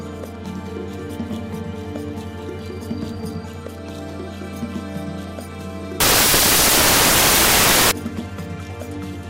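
From 6.00 to 7.91 s, samples built from the wrong bytes: misaligned byte assembly makes the noisy low bits dominate, so the sound turns into loud, harsh broadband noise.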